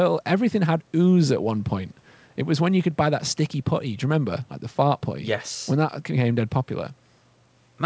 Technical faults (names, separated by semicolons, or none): none